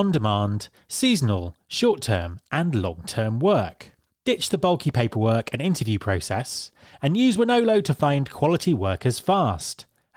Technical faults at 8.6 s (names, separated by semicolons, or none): none